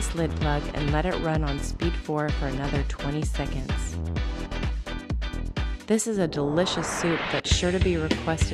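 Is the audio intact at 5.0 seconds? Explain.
Yes, the audio at 5.0 seconds is intact, with no dropout, glitch or other fault at that moment.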